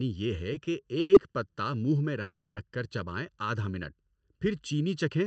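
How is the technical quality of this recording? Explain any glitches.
The recording has three clear problems: a hollow, phasey colour throughout and two timing glitches from a call link.

Channel delay (comb filtering) runs through the whole clip. One channel arrives late by well under a millisecond, roughly 0.7 ms, and the two are mixed to mono. Shared sound cancels at evenly spaced frequencies, with the first notch around 700 Hz. The speech sounds hollow and slightly dull. The call codec's upper limit near 8 kHz adds to that muffled edge.

A short stall from a late packet occurs from 1.01 to 1.12 s, just before "پتہ منہ میں". A packet came late and the jitter buffer emptied. The receiver stretched the last sound for about 90 ms, then resumed at the same point. Nothing is lost. The sound is held a touch too long, with a slight buzz or dip.

A call audio freeze follows from 2.22 to 2.59 s, between "پتہ منہ میں" and "کر چبائیں آدھ". 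It was likely caused by packets held up in transit. The last sound is drawn out as a fading buzz or hiss for about 350 ms. It ends in a brief near-silence of about 20 ms. Speech then resumes where it stopped, so a pause has been inserted, but nothing is missing.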